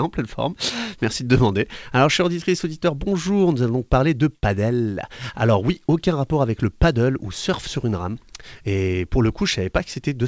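No technical faults are audible.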